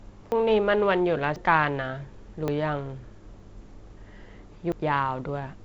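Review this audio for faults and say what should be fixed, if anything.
The sound jumps ahead at 0.32, 1.36, 2.48, 3.4 and 4.72 s, skipping about a tenth of a second or less. There is no silent gap, so this is likely a dropped buffer (overrun), not a dropout. Prevent it by giving the capture thread higher priority or a larger buffer so samples are read before being overwritten.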